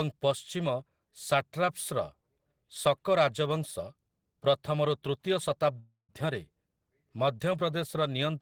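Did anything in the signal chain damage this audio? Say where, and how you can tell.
Yes. Long network dropout, 5.79 to 6.11 s: the speech dissolves into a fading buzz, then roughly 130 ms of silence. About 300 ms is lost, likely from packets that never arrived.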